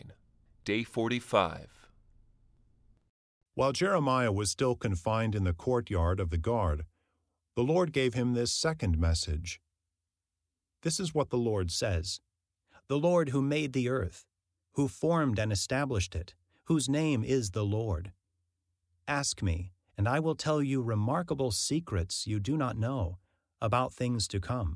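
From 0.00 to 11.76 s, wrong sample rate: speech plays at 0.92 speed and 1.47 semitones low, fitting 24 kHz audio played at 22 kHz. Spectrogram harmonics sit lower.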